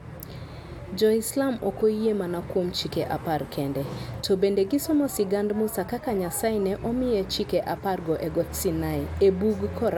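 No technical faults are audible.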